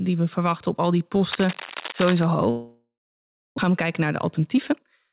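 Right after "verwachten op al die", from 1.30 to 2.24 s, a dense, ragged scratching and rustling rides over the speech at about 10 dB below it, coarse and uneven rather than a steady hiss. This is cable scratch noise, most likely a worn cable, connector or control being moved so that its contact resistance jumps around rapidly and injects irregular bursts of noise into the signal.

From 2.50 to 3.60 s comes a long network dropout. The last sound before the gap is stretched into a fading buzzy hiss. The remaining 0.66 s is bare silence. The speech then resumes with roughly 0.82 s of it simply gone, so the flow jumps ahead. This points to packets most likely not arriving for over a second, with the receiver concealing what it could before giving up. The delay shifted by a fifth of a second or so around the gap.

From 3.68 to 5.08 s the speech sounds hurried, running at about 109% of normal pace while the pitch stays put. 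This is a jitter buffer speed-up. After the delay grew, the buffer held more audio than it aims for, and the receiver trimmed out short pitch-period slices again and again, roughly 150 ms in total, to catch up. Throughout, the narrow band with nothing above 4 kHz fits a G.711 mu-law call path.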